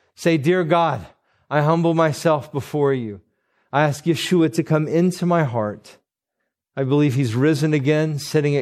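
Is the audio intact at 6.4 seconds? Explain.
No. At 6.39 s, between "come into my heart" and "I believe he's", the speech jumps forward by about a tenth of a second with a brief smeared blip rather than a click. These are compressed frames skipped: whole frames were dropped, and the jump fits roughly four 26.1 ms frames. Overlapping neighbouring frames blur the join. Around that moment the speech also sounds watery and swirly, with chirpy s sounds. This is likely MP3 compression at a low bitrate, around 64 kbps, where the encoder lets weak frequency lines flicker on and off.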